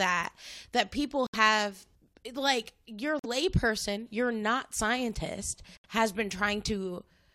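Corrupt frame muted at 1.27 s, 3.19 s and 5.75 s: the speech drops abruptly into silence for about 90 ms, 70 ms and 110 ms respectively, then resumes in step with no shift in timing. Damaged bits in the compressed stream made the decoder reject whole frames, and the player filled each gap with silence. Each hole's length points to three, two and four consecutive frames lost.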